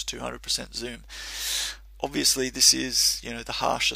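No technical fault can be heard anywhere in this audio. There is nothing in it to point to or explain.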